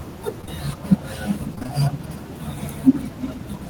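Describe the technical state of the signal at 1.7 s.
At 1.7 s the speech is inside a stretch of repeated packet loss (robotic sound), 1.55–1.80 s. Short gaps, up to 23 ms, are patched by extending prior sound, making it choppy with pieces missing.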